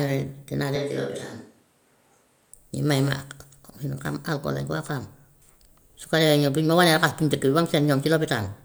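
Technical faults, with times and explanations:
0.76–2.53 s, switch to a distant microphone: speech abruptly turns roomy, hollow and bass-light at about the same level, then snaps back, likely as the close microphone dropped out.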